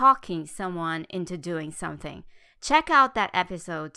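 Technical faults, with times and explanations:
No audible technical faults.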